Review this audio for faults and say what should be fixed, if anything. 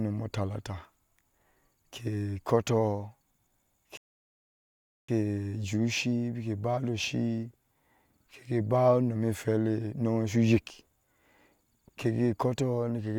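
At 3.97 s the speech drops abruptly into silence and stays there until 5.09 s, when it picks up at exactly the point where it broke off, with nothing skipped. This is a rebuffering stall: playback consumed all the audio it had downloaded and had to wait for more data before continuing. No content is lost, but the gap adds about 1.1 s to the clip. Prevent it by keeping a deeper playback buffer or lowering the streaming bitrate when throughput falls.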